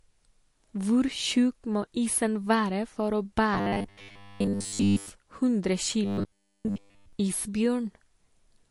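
MP3 compression runs throughout. The watery, swirling texture is plainly audible, likely from an encoder starved of bits, which fits a rate near 48 kbps.

Robotic sound from repeated short buffers occurs from 3.54 to 5.12 s, just after "isen være for å", and again from 6.05 to 7.13 s. Repeating a 10 ms slice likely imposes a rigid 100 Hz metallic buzz, over most of the first stretch and all of the second.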